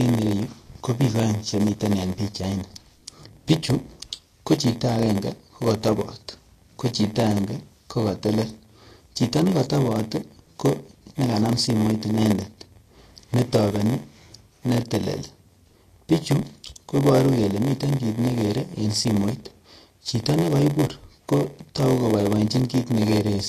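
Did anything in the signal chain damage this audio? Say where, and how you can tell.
Yes. A steady buzz at 86.1 Hz runs through the whole clip, and the speech drags at 0.938 times normal speed with its timbre unchanged. This is a block size mismatch (padded) at the driver or buffer stage. Each 512-sample read receives a shorter block, and zeros fill the remainder.

The speech is also hissy and grainy, with blurred consonant attacks and nothing above 14.2 kHz throughout. This is likely Vorbis compression at the codec stage, at a low bitrate around 41 kbps. Coarsely quantised treble turns fine detail into noise, and the cut-off removes the top band.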